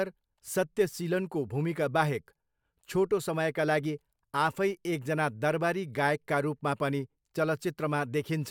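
No technical faults can be heard in the speech. There is no moment in the recording that needs to be marked.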